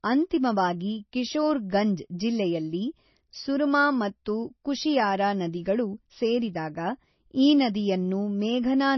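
From start to end the speech has a hard ceiling near 5.9 kHz, with watery, swirling texture and metallic chirps on s sounds, most likely heavy MP3 compression at a rate that fits about 24 kbps. Unlike a plain low-pass filter, the flickering swirl reveals frame-by-frame bit starvation.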